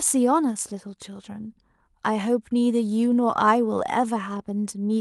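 No technical faults can be heard anywhere in the recording.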